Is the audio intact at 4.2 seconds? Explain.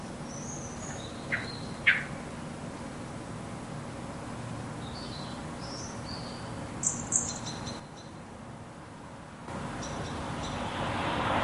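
Yes, the audio is intact at 4.2 seconds, with no audible fault at that moment.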